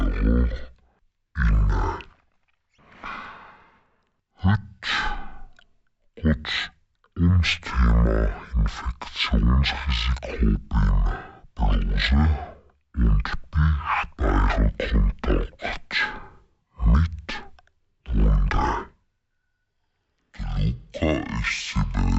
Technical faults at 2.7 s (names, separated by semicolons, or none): stereo read as mono